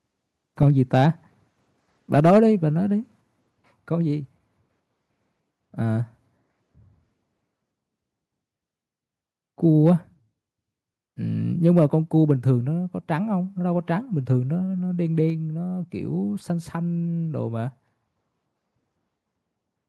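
From 0.67 to 1.04 s the loudest speech peaks turn harsh and crackly, most likely microphone overload: the input was driven about 3 dB past the converter's limit, so a small share of samples had their tops sheared off. From 2.16 to 2.39 s the same overload returns, again about 3 dB over, with a few percent of samples flattened. On the waveform these stretches show peaks pressed into flat plateaus. A spectrogram shows bright vertical smears of added high-frequency energy.

Inside that second burst, at 2.2 s, the whole signal, voice and background together, drops abruptly by about 2 dB. This is likely the microphone volume stepped down by the call software reacting to the clipping. A second, deeper step of about 4 dB follows at 3.21 s. Each step appears as a sudden one-frame shrink in the waveform envelope and a uniform dimming across all frequencies on the spectrogram.

At 9.86 to 9.89 s a brief overload, only about 1 dB over, leaves a short crackle and a few flattened tops, likely from the input still running hot. 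At 15.3 s the level steps down once more, by about 3 dB, with the same sudden drop in the waveform envelope and the same even dimming on the spectrogram.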